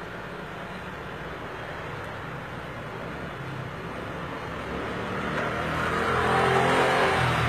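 Heavy low-bitrate encoding, likely HE-AAC compression at something like 20 kbps, runs through this whole clip of sounds. Its treble is rebuilt by copying lower bands upward, so the top end sounds gritty and metallic rather than natural, and nothing remains above 14.8 kHz.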